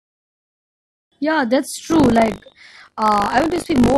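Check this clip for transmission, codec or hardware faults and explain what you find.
One hardware-side fault is present: buffer tearing from 1.84 s to the end of the speech. Writer and reader pointers have slipped, so a small slice of each 20 ms period replays audio roughly 40 ms old, giving a robotic 50 Hz buzz whenever speech is present.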